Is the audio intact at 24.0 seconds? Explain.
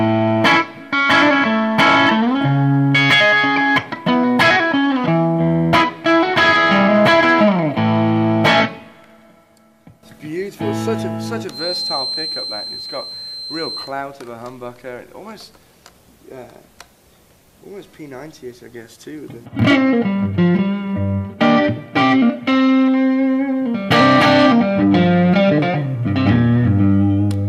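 Yes, at 24.0 seconds the audio is intact, with no dropout, click, distortion or other technical fault to be heard at that point.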